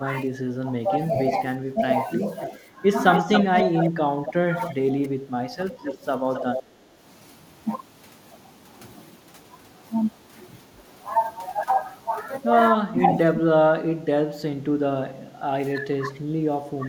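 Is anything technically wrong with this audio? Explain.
Yes. There are two faults, speech suppressed in double talk and echo leak.

From 0.0 to 5.91 s, and again from 12.76 to 13.59 s and 14.27 to 16.88 s, the speech dips and breaks up in pieces. This is speech suppressed in double talk. The likely cause is an echo canceller that cannot tell this talker from loudspeaker echo while both sides speak, so it turns everything down. The first stretch loses about 2 s in all, with drops near 10 dB. The later stretches cut deeper, near 25 dB.

From 3.12 to 5.08 s and from 5.72 to 6.63 s, a delayed copy of the speech trails the original by 270 ms. This is echo leak. The likely cause is a far-end loudspeaker whose echo canceller fails to remove its own pickup, so the sound is sent back. The first leak is strong, about 5 dB below the speech. The second is fainter, about 10 dB below.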